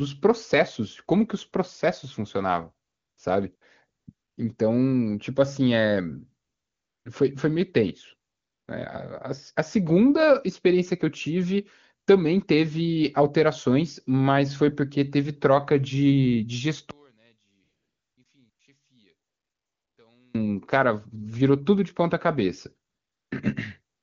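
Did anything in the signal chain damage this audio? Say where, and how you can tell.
Yes. The call-processing stage shows AMR comfort noise twelve times between 2.87 s and 24.02 s. The events cluster around 2.9 to 4.4 s, 6.5 to 8.7 s, 17.6 to 20.0 s and 22.9 s to the end, and run from 20 ms to 700 ms. The background in each one is replaced by a smooth, steady hiss that switches in and out abruptly. This happens because the sender judged those stretches silent and stopped transmitting speech frames. The receiver then synthesised noise from a coarse level-and-spectrum description.

From 16.91 s to 20.35 s the level collapses by about 39 dB and the speech becomes a faint residue. That points to one channel inverted: with one side's polarity reversed, the centred content common to both channels cancels on a mono sum, leaving only their small difference. The stage is likely the analogue wiring or the driver, where a single leg was flipped. 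The wideband codec carrying this audio sounds clean throughout, which fits a high AMR-WB rate.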